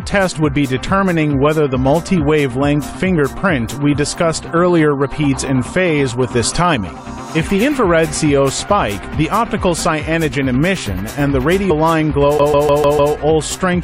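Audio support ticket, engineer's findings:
Compressed frames skipped at 11.69 s. Audio jumps ahead by roughly 70 ms, which fits about three lost frames of 23.2 ms each. Probable component: decoder input, either missing or damaged frames discarded. Distinguished from a CD skip by being a single forward jump with no repetition.

CD stuck on one turn, 12.38 to 13.14 s. The same 150 ms segment replays five times, with a brief mute at each jump. Probable component: disc transport, where a scratch throws the laser back one track every rotation. Fast, even stutter. Unlike the frame skip, audio repeats instead of being lost.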